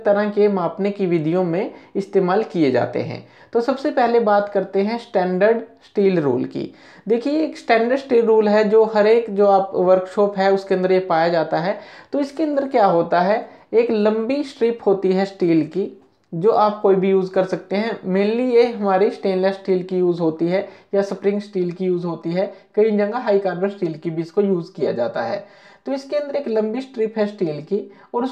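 From 21.32 s to the end, one channel arrives roughly 5 ms late and is summed with the other, a channel delay (comb filtering). Shared content cancels at evenly spaced frequencies, starting near 100 Hz, so the sound turns hollow and phasey.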